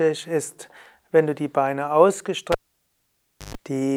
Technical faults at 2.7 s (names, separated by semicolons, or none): cable pulled and plugged in